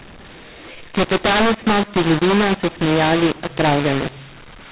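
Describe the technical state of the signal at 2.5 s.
At 2.5 s you're hearing the mu-law and A-law mix-up, and it isn't local to that moment: it runs through the whole clip. The speech was coded as G.711 mu-law but decoded as if it were A-law, so each 8-bit code lands on the wrong step of the log curve. Levels get scrambled, some too loud and some too soft, which makes the speech harsh and gritty, and the quiet gaps get pushed up into an audible noise floor.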